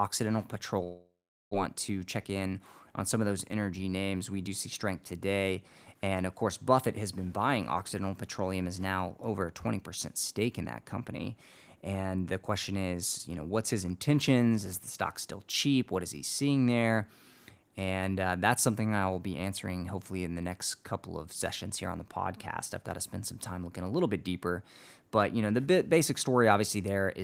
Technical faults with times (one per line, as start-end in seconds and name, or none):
0.83-1.55 long network dropout
1.73-2.80 jitter buffer speed-up